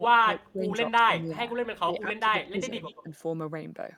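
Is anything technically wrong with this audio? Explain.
Yes. Speech suppressed in double talk occurs at 0.00–0.64 s, 0.98–1.57 s, 1.86–2.71 s and 3.03–3.13 s. The likely cause is that both ends talked at once and the echo canceller, unable to separate the near talker from loudspeaker echo, turned everything down. The voice sinks by roughly 25 dB in the first stretch, around 15 dB in the next two, and only slightly in the last, with each dip lasting about half a second except the brief final one.

Echo leak appears from 2.76 to 3.03 s. A faint delayed copy of the speech, trailing by 123 ms and sitting about 20 dB below it, slips through. This is likely loudspeaker sound picked up by the far end's microphone that its echo canceller failed to fully remove, so it was sent back down the line.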